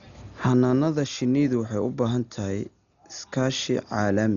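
Dolby Digital compression damage runs throughout this speech clip: nothing is left above 6.9 kHz, so it sounds dull, with a rough, fluttering noise around voiced tones. This is likely from heavy AC-3 coding at a very low bitrate, which fits about 40 kbps, where many frequency lines get no mantissa bits and are filled with dither noise.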